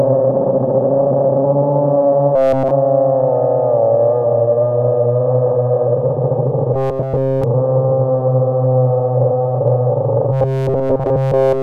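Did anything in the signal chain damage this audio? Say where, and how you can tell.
Yes. A rigid, metallic 133 Hz buzz at 2.36–2.72 s, 6.74–7.44 s and 10.32 s to the end is robotic sound from repeated short buffers, likely a driver-buffer underrun looping about 7.5 ms.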